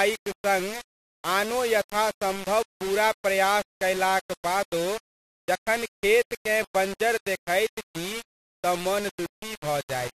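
Throughout the speech, the signal has likely been reduced to very few amplitude steps and rounded without dither, which fits a 4-bit word length. This is low bit depth without dither: the rounding error follows the waveform instead of spreading as smooth hiss, so the distortion sits only around 15 dB below the speech. Every syllable carries a coarse, grainy buzz that shifts with the sound, and quiet decays break up and sputter as they fall between steps.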